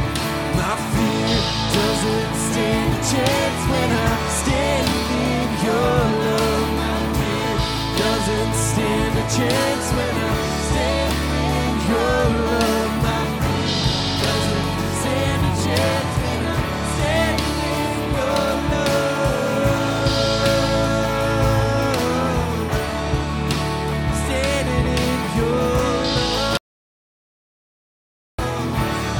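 At 26.57 s the sound cuts out abruptly. This is an audio dropout to silence. It lasts about 1.8 s, until the sound returns mid-flow at 28.39 s. The gap is silence, with no room tone or background left underneath. The input was likely lost for that stretch, through a disconnected device, a broken link or a stray mute, while the recording carried on writing silence. Whatever sounded in that interval is gone.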